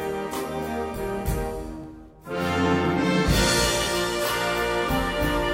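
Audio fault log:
1.84–4.89 s, periodic USB or driver dropouts: about four short losses, roughly 10 ms each, repeat every 1.01 s. Each time, something stalls the USB bus or audio driver and a small piece of audio is skipped rather than filled, so the signal jumps straight ahead and gives a regular tick. The waveform shows abrupt discontinuities at even spacing, and the spectrogram shows thin vertical broadband lines about a second apart.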